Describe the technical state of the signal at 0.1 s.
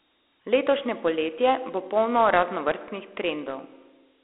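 At 0.1 s you're hearing Dialogic VOX ADPCM, present throughout. Coarse 4-bit coding leaves a gritty hiss, a 300 Hz–3.5 kHz line band, and nothing above 3.8 kHz, which points to 32 kbps.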